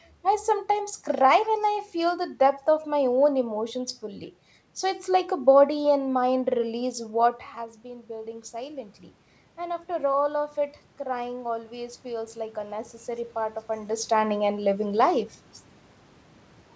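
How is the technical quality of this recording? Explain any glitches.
There's one real glitch, an automatic gain rising episode from 9.57 to 14.02 s. The input had dropped by about 12 dB, so the AGC gradually raised its gain by about 5 dB, and the voice and room noise swell up together across those seconds. The audio's top end stops at 8 kHz, consistent with a G.722 call path.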